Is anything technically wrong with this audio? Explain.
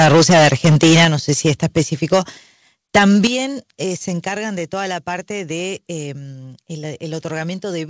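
Yes. The speech has two linked faults: microphone overload and a stepped-down microphone volume.

Microphone overload runs from the start to 1.81 s, about 13 dB over full scale, with roughly a fifth of the waveform flattened. It returns from 2.95 to 3.27 s, just before "eh se", about 6 dB over with a smaller share clipped. The likely cause is input gain set too high, so peaks hit the converter's ceiling and their tops are sliced off. That gives a harsh, crackling edge that rides the loudest syllables. Codec distortion would instead smear evenly across quiet and loud passages alike.

The microphone volume is stepped down at 1.05 s and again at 3.27 s, right before "eh se". Each time, the voice and the background drop together by about 8 dB. This is likely the call software's automatic gain control reacting to the clipped peaks by lowering the device level in a single jump. What marks it out is the instant, step-like fall immediately after distortion. 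A natural fade or a compressor would dip gradually and then recover. The audio also stops at 8 kHz, which fits a G.722 call path.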